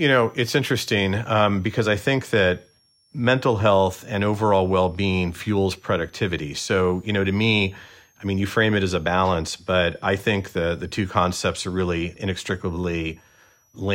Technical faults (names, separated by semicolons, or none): switching supply whistle